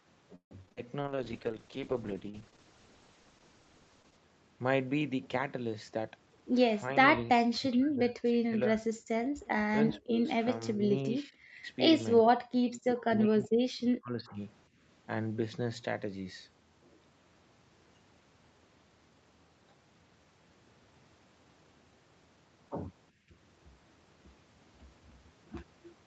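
Right at the start, from 0.35 to 0.91 s, the speech goes choppy. That's repeated packet loss: five gaps in just over half a second, the longest about 156 ms. The receiver patched each hole by stretching out the last bit of sound, so more than half of that span is concealment, and roughly 100 ms is simply missing.

Straight after, from 1.01 to 4.25 s, you get a call bitrate drop. The encoder was pushed from 64 kbps down to 9 kbps and sat at the bottom for about 3.2 s. At that rate Opus codes much more coarsely and trims the top end, so the voice turns rough, watery and muffled until the bitrate climbs back. Outside that stretch the call path's normal 8 kHz bandwidth limit is what you hear.

From 5.92 to 7.31 s there's a jitter buffer speed-up. The buffer had built up more audio than it wanted, so it kept cutting out tiny pitch-period chunks, around 150 ms in total. Speech runs about 10% fast at the same pitch, and it sounds a little hurried.

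Then come stretches of speech suppressed in double talk, at 7.69–8.89, 9.96–10.27, 10.74–11.65, 12.61–13.1, 13.26–14.39 and 23.29–23.34 s. The voice dips or breaks up in pieces, by about 30 dB in three of them, about 40 dB at its deepest around 13.3–14.4 s, only about 15 dB at 10 s and barely a few dB in the short blip at 23.3 s. The likely cause is an echo canceller that couldn't tell the talker apart from loudspeaker echo while both sides were talking, so it turned everything down.

Tucked in at 9.89–10.0 s is a brief echo leak: a faint, delayed copy of the voice, about 361 ms late and around 30 dB below the speech, so it's a quiet scrap rather than an obvious repeat. That's likely a loudspeaker on one end whose echo canceller didn't fully remove what its microphone picked up, so a bit got sent back.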